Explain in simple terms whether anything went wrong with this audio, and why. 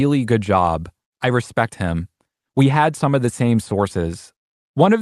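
Nothing went wrong with this speech recording. It has passed through an internet call connection, and the sound tops out around 12 kHz, which points to the call codec trimming the very highest frequencies as it normally does.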